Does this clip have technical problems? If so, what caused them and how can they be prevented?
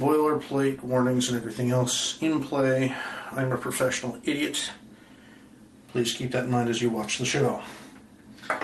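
No, the clip has no technical problems. It went through a call path whose coding tops out around 12 kHz, which fits Opus at about 24 kbps.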